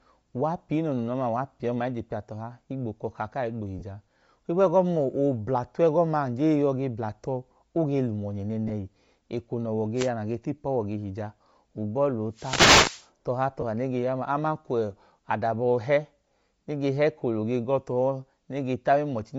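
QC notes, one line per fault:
throughout, Bluetooth LC3 compression: the upper spectrum is plainly thinned and replaced by a breathy, grainy hiss that rides on the speech. This is likely low-rate LC3 coding, consistent with about 32 kbps and 10 ms frames. Unlike the gaps below, it never stops.
3.79 to 3.84 s, 8.68 to 8.71 s and 13.61 to 13.64 s, lost LE Audio frames: brief holes of 30 ms, then 20 ms and 20 ms, where the decoder repeats the last spectrum with scrambled phase. This gives a short noisy smear rather than static, with no rise in background hiss.
9.95 to 10.10 s and 12.32 to 13.09 s, wireless microphone noise hit: the radio signal fades, so receiver noise swells into a swish of static over the speech. The second hit lasts about 0.8 s. These hits are broadband noise bursts, longer and hissier than the frame-loss smears.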